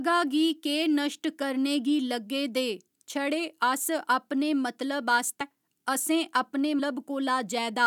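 A speech clip with compressed frames skipped at 5.40 s and 6.78 s. The audio jumps ahead roughly 150 ms, then 300 ms. Each jump fits whole 26.1 ms frames dropping out.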